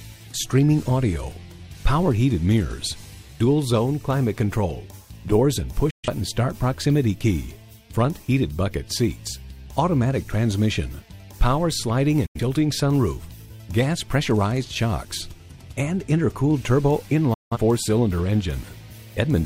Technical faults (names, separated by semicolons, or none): digital broadcast dropout